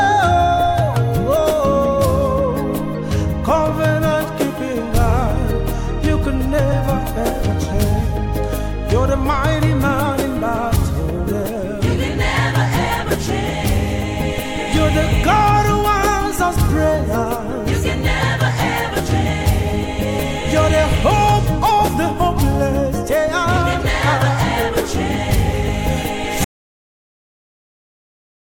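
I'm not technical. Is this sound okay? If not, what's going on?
No. At 1.35 s and 6.71 s you can hear compressed frames skipped. The sound briefly jumps ahead, by about two frames (roughly 50 ms) and then about three (roughly 70 ms), using 23.2 ms frames.

From 26.44 s to the end there is an audio dropout to silence. The sound cuts off into total silence, with no background noise at all. This is likely the input being lost while the recording carried on, so whatever followed is gone.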